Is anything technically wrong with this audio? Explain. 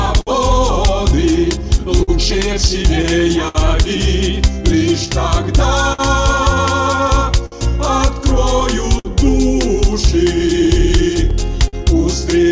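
Yes. Three related timing faults run through the audio, which passes through a G.722 call path at 64 kbps with nothing above 8 kHz.

Clock drift between sender and receiver is present for the whole clip. The sender's clock runs roughly 5 percent slower than the receiver's, so the jitter buffer keeps draining. This leaves the receiver short of material and forces the recurring corrections described below.

Repeated timing corrections run from 0.17 s to 12.44 s. To cover the slow sender, the receiver repeatedly stretches short pieces, playing at 99 percent speed and adding around 150 ms in total. The edits are unevenly spaced and heard, if at all, as slight hiccups or an unsteady tempo.

Scattered short gaps fall in two stretches, each filled by extending the last sound. From 0.06 s to 3.57 s there are about seven, the longest around 70 ms. From 5.42 s to 11.75 s there are about ten, the longest around 50 ms. 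Each is a brief tick, smear or hiccup.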